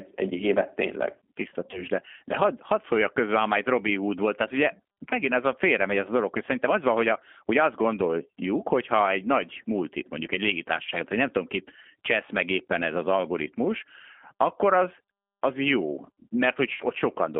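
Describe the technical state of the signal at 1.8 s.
At 1.8 s the signal is inside a stretch of VoIP packet loss concealed by the speech codec, running from 1.71 to 1.85 s. About 20 ms of audio, consistent with a single lost packet, was replaced by the decoder extrapolating its last pitch and filter at falling gain. Unlike a plain dropout, there is no silence. The sound smears into a fading buzzy tone or coloured noise and stays weak for a short while after real packets return.

Underneath, the whole clip carries the G.729 codec sound, clearly audible here. Speech is confined to roughly 200 Hz to 3.4 kHz, with a rough, synthetic texture that fits an 8 kbit/s coder. That texture distinguishes it from simple band-limiting, which would only sound muffled.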